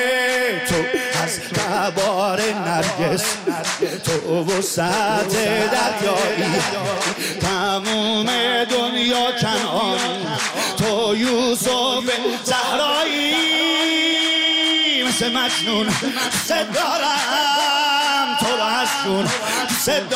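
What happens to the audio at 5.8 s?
A doubled audio track runs from 5.09 to 7.13 s. A dry copy, about 5 dB quieter, trails about 0.7 s behind, starting and stopping abruptly. Likely cause: a second, slower capture path.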